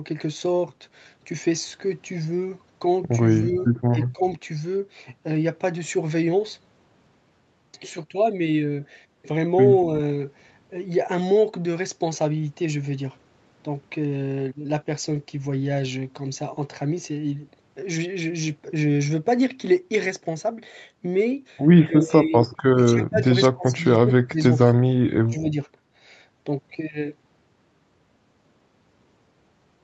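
At 3.58 to 3.62 s a faint copy of the speech returns about 250 ms late and about 25 dB down, likely an echo leak past the far end's canceller. The speech then dips by roughly 20 to 35 dB at 3.93 to 4.25, 21.86 to 22.33, 22.53 to 23.29, 23.53 to 23.85, 24.02 to 24.39 and 25.26 to 25.56 s, likely the sound of speech suppressed in double talk as the canceller ducks both sides.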